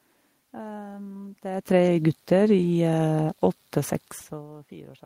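No technical faults are audible.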